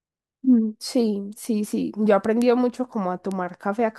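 At 1.45 s there's a single sharp tick, then two more at 2.42 s and 3.32 s. Each is a bit error spike: one sample where a flipped bit made the value jump by a power of two before it snapped straight back. That's why each one is a broadband click with no relation to the speech around it. They peak at about -16, -4 and -10 dBFS, so the middle one is clearly the loudest.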